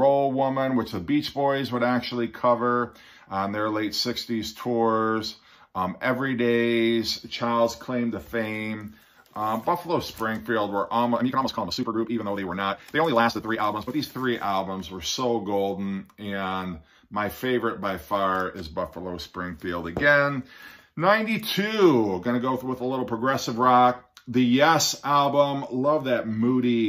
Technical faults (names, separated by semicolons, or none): time-stretched section